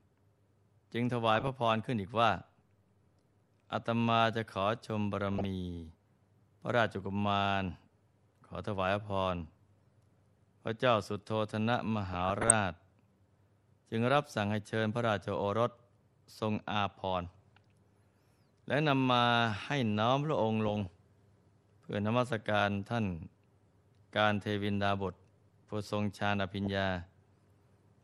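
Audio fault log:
throughout MP2 compression: The speech has a dull, band-limited quality with a granular, gurgling roughness. This is likely MPEG Layer II coding at a low rate, consistent with about 80 kbps. Too few bits are shared across the 32 sub-bands, so upper bands drop out and flicker back, and the bands that remain are coarsely quantised. The damage is plainly audible.
1.35–1.49 s, 5.28–5.45 s, 12.14–12.53 s, 20.66–20.91 s, 24.94 s, 26.65–26.71 s DAB burbling: Short bursts of burbling distortion sit on top of the speech. Bit errors are getting past error correction into the MP2 data, so corrupted samples put short blips of noise in single sub-bands, and corrupted scale factors make sub-bands jump in level for up to a frame. The longest burst, at 12.14 s, points to over a dozen damaged frames. The error rate is low, a small fraction of a percent.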